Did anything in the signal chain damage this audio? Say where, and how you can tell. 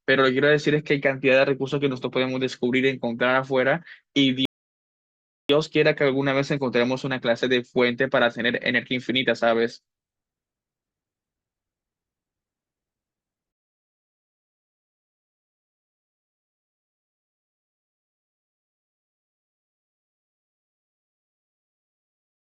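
Yes: a rebuffering stall at playback, 4.45 to 5.49 s. The speech drops to silence, then resumes exactly where it stopped: the player starved, adding about 1.04 s.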